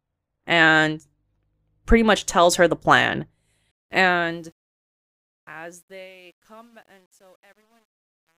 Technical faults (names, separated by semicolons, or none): truncation distortion on a fade